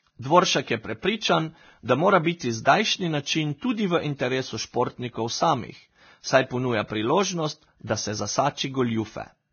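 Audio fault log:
Throughout, Vorbis compression: the speech has likely gone through a heavily squeezed Vorbis encoder, consistent with about 18 kbps. It cuts everything above 6.5 kHz and quantises the remaining treble so coarsely that fine detail becomes hiss, leaving the sound dull, grainy and blurred at attacks.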